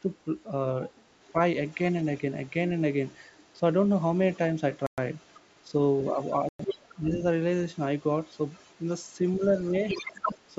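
An echo canceller that likely failed to remove the loudspeaker signal lets the other side's voice leak through, first as a faint scrap at 1.22 to 1.32 s about 30 dB below the talker, then for longer stretches from 1.67 to 4.38 s and 4.74 to 5.61 s at about 35 dB down.

Inside that second stretch a Bluetooth stall, likely from interference draining the headphone buffer, drops the sound to silence for 114 ms at 4.87 to 4.98 s before it resumes.

The leakage returns louder, about 25 dB down, from 5.93 to 7.07 s, and a second Bluetooth stall cuts 106 ms of silence at 6.49 to 6.60 s.

As both sides overlap, the echo canceller likely mistakes the talker for echo, producing speech suppressed in double talk. From 6.75 to 7.24 s the voice ducks by as much as about 20 dB, totalling roughly a third of a second.

From 7.75 to 10.5 s the other side's voice comes through strongest, only about 15 dB under the talker. 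During it, from 9.96 to 10.23 s, double-talk suppression again pulls the talker down by up to about 10 dB over roughly a fifth of a second.

The call microphone processing, which leaves nothing above 8 kHz, is normal and not a fault.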